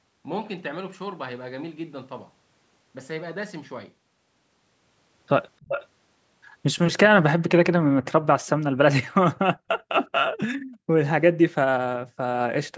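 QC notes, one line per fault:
5.6–5.87 s, echo leak: a delayed copy of the speech comes back about 370 ms late and only about 10 dB down, likely from a loudspeaker echo the far end's canceller didn't fully remove.
7.83–7.97 s, background gated by the echo canceller: the room sound drops by up to about 40 dB for roughly 150 ms, then returns once the canceller releases the microphone.
8.25–9.85 s, speech suppressed in double talk: with both sides talking, the voice dips and cuts out in pieces for around 700 ms in total, by as much as about 40 dB, likely because the canceller couldn't tell the talker from the echo.
10.06–10.1 s and 10.49–10.54 s, echo leak: two brief, faint scraps of the same 367 ms echo, roughly 35–40 dB below the speech, likely residue the canceller missed.
10.59–10.96 s and 12.03–12.19 s, background gated by the echo canceller: the ambience ducks by up to about 40 dB, for about 400 ms and then about 150 ms, while the loudspeaker side plays.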